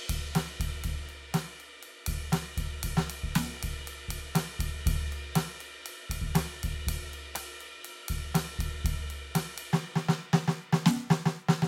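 Music, with no technical faults to report.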